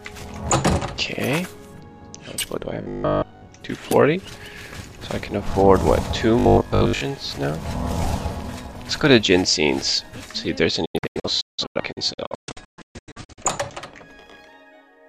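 From 2.82 to 3.50 s and again from 6.39 to 7.01 s, a rigid 50 Hz metallic buzz sets in, a robotic sound that likely comes from repeated 20 ms buffers replacing most of the real audio. Unlike a dropout, the sound never goes silent. From 10.85 to 13.42 s, a digital broadcast dropout leaves many short holes with 8 ms fades, up to 0.17 s each and about 1.3 s in total. Those sections are lost outright.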